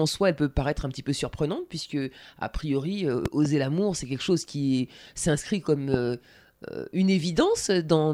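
A loud pop, doubled, hits from 3.26 to 3.48 s after "surprenante puisque a priori", and a single one at 5.94 to 5.96 s after "chose qui s'inscrit comme". Each peaks about 15 dB above the speech, likely from a voltage spike. The waveform shows tall spikes, and the spectrogram shows thin broadband vertical lines.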